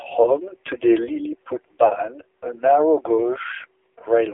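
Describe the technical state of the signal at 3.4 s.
At 3.4 s the speech carries AMR narrowband mobile codec damage, present throughout, confined to roughly 200 Hz–3.5 kHz. Unlike plain band-limiting, its sparse pulse-driven vocal model sounds heavily buzzy and synthetic, consistent with a bitrate near 5.9 kbps.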